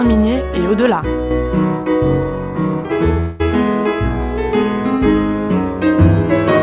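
From 3.2 to 3.42 s the sound turns into a fading, buzzy repeat of its last moment for about 0.2 s, then picks up again with that much missing. This is likely a long network dropout, hidden by stretching the last audio received.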